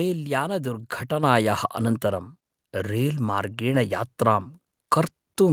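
Speech whose level, voice and background together, jumps up by about 7 dB at 1.23 s: a microphone volume stepped up, as call software raised the device's input gain.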